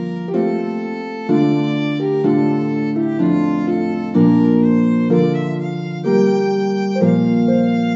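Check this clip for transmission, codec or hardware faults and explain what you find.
Checking this clip, I find no faults to explain.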